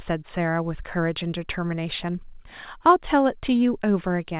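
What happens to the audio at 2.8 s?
Nothing goes wrong at 2.8 s: the speech carries on intact, with the narrow band-limited character of ordinary mu-law telephone coding and no dropout, click or distortion at that point.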